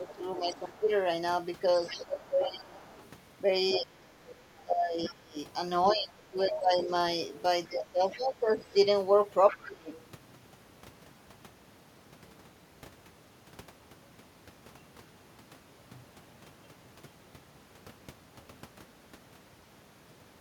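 Speech suppressed in double talk, from 0.0 to 0.89 s and again from 1.89 to 9.9 s: the talker's level dips while the far side speaks, by around 10 dB early and up to about 20 dB later, across roughly 4.4 seconds in all. The likely cause is an echo canceller that could not tell near speech from loudspeaker echo and attenuated both.

The other side's voice leaking through appears at 0.07 to 0.82 s, 1.87 to 5.09 s and 6.51 to 9.98 s. A second voice sits about 20 dB below the talker, rising to about 10 dB below in the last stretch, likely residual loudspeaker echo left uncancelled at the microphone.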